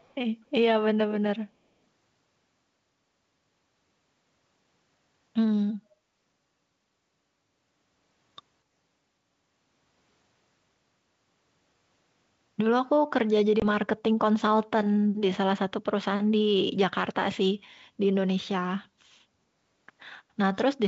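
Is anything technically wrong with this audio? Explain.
Yes, there are two faults.

From 0.00 to 0.14 s, a very faint delayed copy of the speech trails about 247 ms behind, about 40 dB below it. This is likely an echo leak: the far end's loudspeaker sound reached its microphone, and its echo canceller left a residue that was sent back.

At 13.60 to 13.64 s, there is a hard-edged hole of about 20 ms, and the speech comes back briefly unsettled. This is packet loss on an ADPCM call, here the 64 kbit/s G.722 stream. A couple of packets were replaced by silence, so the decoder's predictor and step size drifted from the sender's until they re-converged.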